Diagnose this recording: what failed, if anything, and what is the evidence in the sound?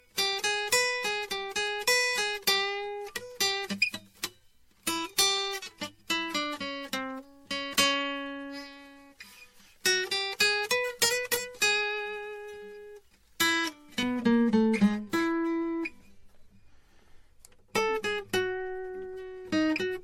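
Swirly, hollow music with blurred attacks and nothing above 16.6 kHz, likely generation loss in the codec stage: roughly seven MP3 re-encodes at 64 kbit/s.

Thin, sibilant brightness from 0 to 14.03 s, about 11 dB hot at 10 kHz: pre-emphasis left on, a J.17 treble boost never de-emphasised.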